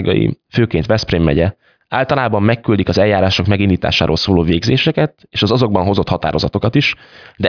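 No technical faults can be heard anywhere in the recording, so there is nothing to place in time order.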